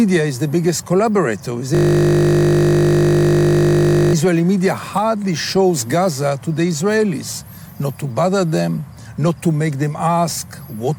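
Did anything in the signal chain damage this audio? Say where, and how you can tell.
Yes. A system hang loop runs from 1.75 to 4.13 s, at the driver or buffer stage. For those 2.4 seconds the audio is replaced by a steady buzz at 50 Hz: one 20 ms slice of sound repeats exactly, about 119 times. The host or driver stopped delivering new samples, and the hardware kept replaying the same ring buffer, which fits a buffer of about 20 ms. Because the loop is so short, the repeats fuse into a tone.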